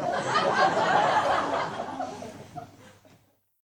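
No technical faults can be heard anywhere in this recording of sound.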